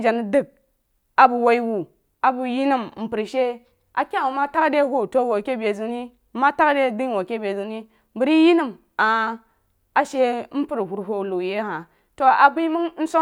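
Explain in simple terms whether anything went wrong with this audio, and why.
Listening through this speech recording, nothing stood out as having gone wrong.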